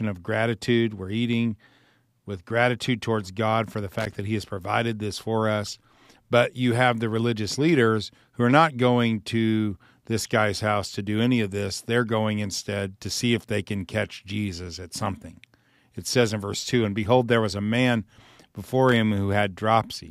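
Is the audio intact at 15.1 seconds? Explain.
Yes, the speech at 15.1 seconds plays through intact, with no dropout, click, distortion or other fault at that moment.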